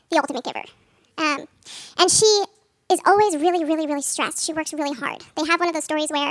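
From start to finish, the speech runs fast and sounds high. The fault is a wrong sample rate. The samples are being played back faster than they were captured, with no conversion between the two rates. Everything speeds up by a factor of 1.5. Pitch rises with it, by 7.0 semitones, close to a musical fifth. That ratio fits 16 kHz audio played at 24 kHz. Voices come across squeaky and hurried throughout.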